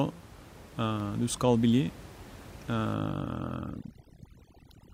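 A speech recording with room noise sitting about 19 dB below the talker, carrying two faults. At 1.0 s there is a block of digital silence only about 0.15 ms long. That is far too short to register as a hole, so it comes across as a single tick where the signal drops out and jumps straight back with no fade. A spike-shaped click from clipping or a bad edit would add energy. This one is a sudden absence of signal. It points to the output buffer not being filled in time for that brief instant.

From 2.94 s to the end, overdone noise removal takes hold. Noise reduction pushed too hard on the room noise shuts off individual frequency bands whenever they dip near its noise estimate. The background collapses to near silence dotted with twinkling specks, and the quieter parts of the voice are stripped away. The fault is separated from low-bitrate codec artefacts by where the damage falls: it clusters in the gaps and soft edges of the speech rather than smearing the whole signal evenly, and the room tone vanishes instead of turning gritty.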